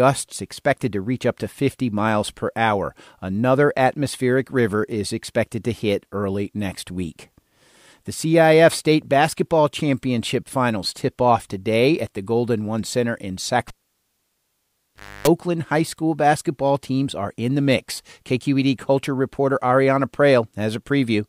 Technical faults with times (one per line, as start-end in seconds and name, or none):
13.68-15.28 cable pulled and plugged in